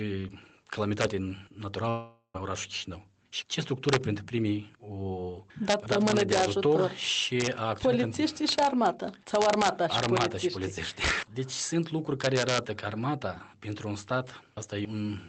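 A gain or summing stage lets loud peaks run past the largest integer, and they wrap to the opposite sign instead of being limited. This integer overflow first strikes at 1.01 to 1.05 s, driving peaks about 3 dB past the limit. Each wrapped sample swings across the full range, so loud moments break into violent cracks far harsher than ordinary clipping.

From 1.89 to 2.36 s the stream stops arriving, most likely a long network dropout. The receiver stretches the last sound into a fading buzz for about 450 ms, with roughly 90 ms of near silence before audio resumes. About 400 ms of material is simply gone, and the playout timing shifts by around 50 ms as the stream picks up again.

The overflow returns at about 2 dB over the limit at 3.89 to 3.96 s, 5.70 to 6.45 s, 7.40 to 7.47 s, 8.48 to 8.86 s, 9.35 to 10.25 s, 11.04 to 11.11 s and 12.24 to 12.58 s. Throughout, the call codec's band limit sits near 8 kHz, with no content above it.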